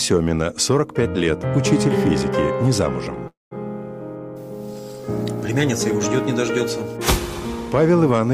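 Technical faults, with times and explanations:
3.27–3.53 s, call audio freeze: packets were likely delayed in transit and the jitter buffer ran dry, so the last sound is stretched into a fading tail, then 170 ms of silence, before playback resumes where it stopped, nothing lost but 239 ms late.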